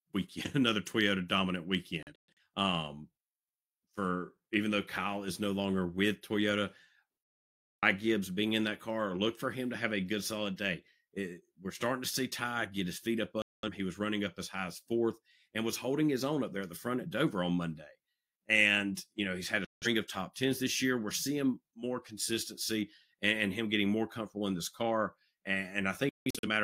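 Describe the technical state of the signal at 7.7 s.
At 7.7 s the speech carries a block size mismatch (truncated) from 0.0 to 8.45 s. Block ends are discarded, giving a 46.9 Hz buzz consistent with 1024-sample blocks, with speech speed essentially unchanged. The spectrogram shows evenly spaced vertical seams until just before "in that car look".

A digital broadcast dropout also mutes the signal from 7.72 to 7.83 s, losing about 0.55 s of programme. It appears as a flat, blank gap in the waveform.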